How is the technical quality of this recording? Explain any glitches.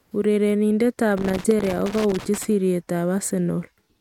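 The recording has one clear fault. Loose connector crackle, 1.17 to 2.45 s: a worn or dirty contact keeps making and breaking, chopping the speech into irregular scratchy crackles.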